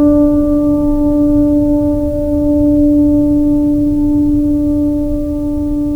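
Listening to this music clip, nothing stood out as a technical fault.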